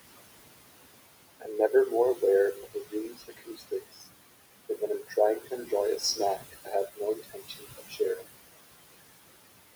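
In this speech clip, a noise suppressor pulls the steady background down by about 20 dB frame by frame, so the room noise, which sits about 13 dB under the voice, pumps between phrases. The same suppressor also cuts speech, mistaking parts of it for noise and turning them down with the background. This leaves soft sounds swallowed and faint between 1.4 and 2.22 s (a brief stretch, dropping by about 18 dB), between 2.54 and 4.07 s (roughly a second in total, down by about 21 dB), and between 4.69 and 8.24 s (again roughly a second, down by about 18 dB).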